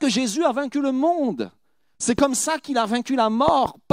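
At 2.19 to 2.21 s there's a loud pop, a single sharp thump about 10 dB above the speech, then a double pop from 3.48 to 3.68 s, around 15 dB up. The likely cause is a voltage spike from a plug, switch or static, with the speech carrying on underneath.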